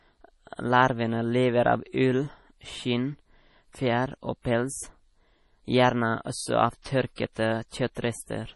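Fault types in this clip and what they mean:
MP3 compression: a low-bitrate encode, likely about 32 kbps, starves the signal of bits, so treble stops near 11.5 kHz and speech sounds watery and swirly.
pre-echo: block coding spreads noise ahead of sharp attacks, leaving 20 to 39 ms of hiss before onsets at 6.82, 7.15, 7.33 and 7.95 s.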